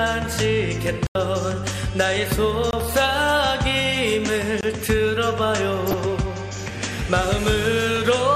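The whole thing has the dull, gurgly, granular sound of MP2 compression, likely a low-rate Layer II encode around 80 kbps, with upper sub-bands dropping out and the rest coarsely quantised. There are three blocks of digital silence where the audio cuts hard to silence and back with no fade: an 85 ms hole from 1.07 to 1.15 s, which fits a missed 4096-sample buffer, and two shorter 21 ms drops at 2.71 to 2.73 s and 4.61 to 4.63 s, consistent with 1024-sample blocks not being filled in time. Then from 5.87 to 5.94 s there's a brief patch of DAB burbling, where bit errors, at a rate of roughly 0.3%, got past error correction and put short blips of noise into individual sub-bands across five frames.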